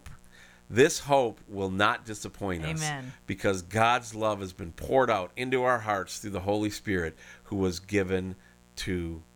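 A speech recording with mains buzz running under it from start to finish, a steady raspy drone that never lets up between phrases. The buzz is tied to a 60 Hz supply, and its harsh edge comes from sharp switching spikes, twice per cycle, whose harmonics climb well into the kilohertz range. It sits roughly 30 dB below the speech, which points to interference picked up through a dimmer, rectifier or poorly shielded cable.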